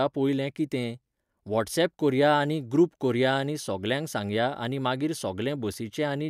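Nothing in this recording of speech stood out as a technical problem on listening.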